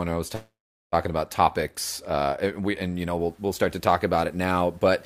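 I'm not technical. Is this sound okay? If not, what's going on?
No. From 0.35 to 0.94 s there is a call audio freeze. The sound stretches into a fading buzz, then silence, likely from delayed network data. Speech then resumes late, nothing lost.

From 3.2 s to the end, there is low bit depth without dither. Quieter parts sound grainy and rough, likely because the audio was stored too coarsely, around 9 bits.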